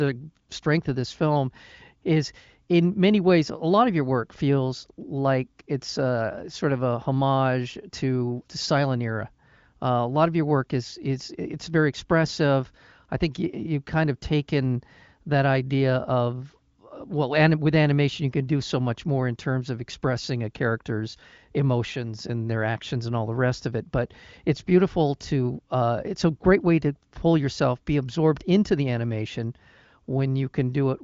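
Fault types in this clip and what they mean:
Nothing stood out on listening to this speech recording.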